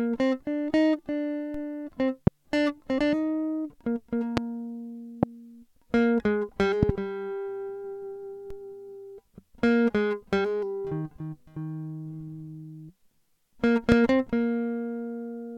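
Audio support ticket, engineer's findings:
DC step, 1.54 s and 8.50 s. Low thump each time, music unaffected. Zero line jumps by about -31 dBFS, then relaxes back through a 5 Hz high-pass. Suspect converter recalibration or an offset input being switched in. Waveform: baseline shifts abruptly, then drifts back to centre. Spectrogram: brief broadband smear at the onset, energy concentrated at the bottom.

Loud pop at 2.27, 4.37, 5.23 and 13.92 s, single pops about 24 ms long, plus a double pop spanning 6.83 to 6.92 s. Sharp pops, roughly 20 dB above the music, which carries on underneath. Likely a voltage transient from a plug, switch, static or driver glitch. Waveform: narrow spikes well above the envelope. Spectrogram: thin vertical full-band lines, a closely spaced pair at 6.8 s.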